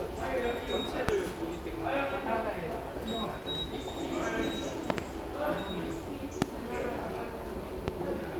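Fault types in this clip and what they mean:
Loud pop: Sharp pops jump well above the sound at 1.1, 4.9 (a double pop), 6.4 and 7.9 s. Each is likely a voltage spike from a plug or switch.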